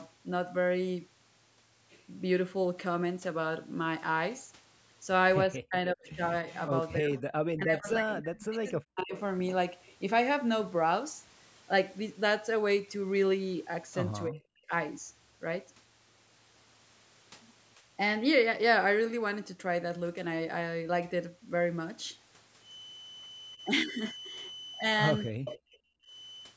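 This is a speech recording from a call, and it shows speech suppressed in double talk several times: from 5.63 to 9.13 s, 14.27 to 14.71 s, 23.56 to 23.6 s and 25.31 to 26.15 s. The voice dips hard, by as much as about 40 dB, though the 23.56 s one is only about 5 dB. That's likely the echo canceller ducking everything while both ends talk at once. There's also echo leak at 6.04 to 6.66 s, 9.16 to 9.2 s and 25.45 to 25.59 s. You hear a delayed copy of the voice trailing about 298 ms behind, roughly 20 dB down in the first two and about 10 dB down in the last. It's likely the far end's loudspeaker pickup getting past its canceller. From 22.58 s to the end, a thin feedback whistle at 3 kHz sits about 15 dB under the speech and swells and fades slowly. The likely cause is the speaker-to-mic loop hovering right at the edge of feedback.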